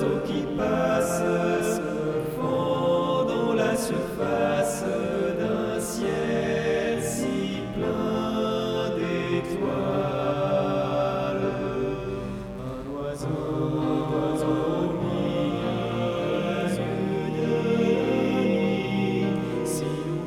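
A mains buzz runs from start to finish, sitting roughly 20 dB below the sound. Sharp switching spikes, twice per 60 Hz cycle, spread harmonics into the kilohertz range, so it rasps and buzzes rather than giving the smooth, low tone of plain hum.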